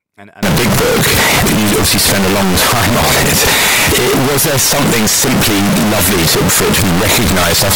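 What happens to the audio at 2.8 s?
At 2.8 s the speech sits inside a stretch of severe, harsh distortion running from 0.43 s to the end of the clip, most likely signed and unsigned mixed up in reading the 16-bit samples. Flipping the top bit turns every zero crossing into a full-range jump, so the result is very loud throughout. Unlike clipping, which only flattens loud peaks, here the quiet passages blare as loudly as the rest.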